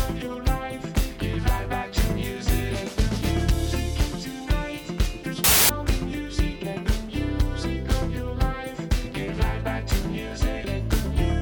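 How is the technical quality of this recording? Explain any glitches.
One glitch stands out. From 5.44 to 5.69 s, a wrong sample width fault: 16-bit data read as packed 24-bit. Mismatched bytes give loud noise, 1.5 times too fast.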